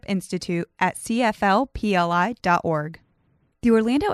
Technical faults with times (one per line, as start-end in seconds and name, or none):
none